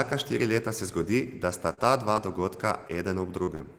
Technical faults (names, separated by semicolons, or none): short concealed packet loss; burst of packet loss